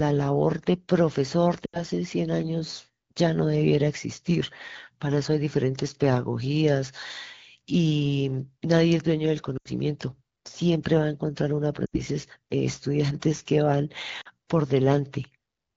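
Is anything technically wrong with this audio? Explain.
Yes. The speech has lost AMR speech frames at 1.65 to 1.82 s, 9.57 to 9.70 s, 11.86 to 12.01 s and 14.21 to 14.28 s. Radio errors corrupted short runs of frames, and the wideband decoder filled each gap by repeating the last good pitch and vocal tract shape at falling level. About 80 ms goes missing in the first three, and about 40 ms in the last. Each sounds like a brief dip that drops to near silence within two frames, and the voice returns weak or rough for a moment.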